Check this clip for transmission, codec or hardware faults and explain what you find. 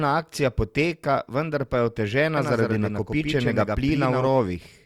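One fault shows up in this speech clip: a doubled audio track from 2.37 s to 4.27 s, starting just after "poteka vendar pa je". The same signal is likely being captured twice, once through a slower path, so a second full-band copy about a tenth of a second late and roughly 5 dB quieter is mixed in with the original. It sounds like a dry, flat slapback echo with no room decay, and it appears and disappears abruptly at those two points.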